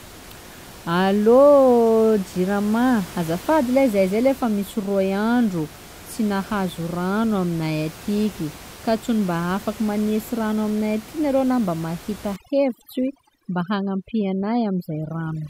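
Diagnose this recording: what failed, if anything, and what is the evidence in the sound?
Overdone noise removal in the call-processing stage sets in at 12.36 s, right after "mba mahita", and lasts to the end at 15.5 s. Bands the suppressor judges close to its noise estimate are pushed far down or cut. The room noise, sitting about 20 dB under the speech before this point, drops and breaks up into twinkling specks, and quiet parts of the speech are removed with it. On a spectrogram the background becomes black, scattered with isolated bright dots, and the speech shows ragged gaps. The waveform's quiet stretches flatten almost to zero.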